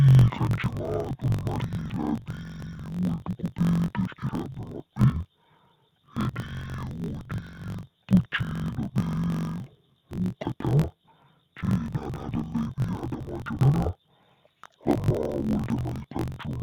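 Throughout, interleaved audio read as planar plays each 21.33 ms block's halves together at half speed. The speech drops an octave and sounds doubled and choppy, with blocks at 46.9 Hz, yet its pace stays normal.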